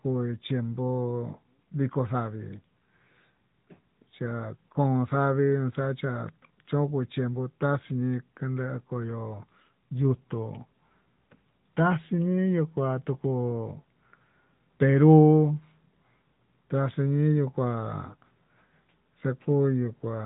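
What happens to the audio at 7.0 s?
At 7.0 s the AMR narrowband mobile codec is at work, as it is across the whole clip. The speech is rebuilt from a vocal-tract model fed by sparse pulses, nothing above 3.8 kHz survives, and the plainly audible buzzy, synthetic edge points to a mid bitrate around 10 kbps.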